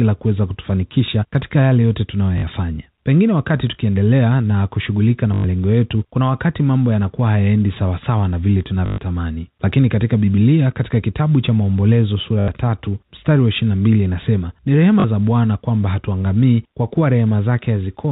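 At 2.38 s, packet loss with last packet repeated replaces 40 ms of speech with a looped fragment, giving a brief robotic stutter. A sharp snap at 3.67 s is most likely an electrical switching spike from a nearby switch or discharge coupling into the line. The same packet repetition returns at 5.34 s for 100 ms, 8.86 s for 120 ms, 12.40 s for 80 ms and 15.00 s for 40 ms. The longer runs buzz at about 50 Hz, which fits 20 ms packets. Beneath this, the G.711 telephone coding limits the band to below 4 kHz.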